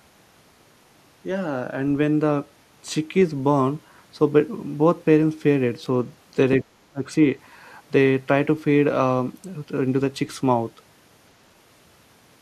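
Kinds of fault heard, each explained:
Speech suppressed in double talk: between 6.64 and 7.09 s the speech abruptly sinks by roughly 25 dB, with about 300 ms of it turned down in all. The likely cause is an echo canceller that heard two sides talking at once, could not tell this talker from its own loudspeaker echo, and pulled both down. Unlike a network dropout, the level is clamped rather than replaced by silence or glitches, and unlike automatic gain control it is not a slow, smooth swell.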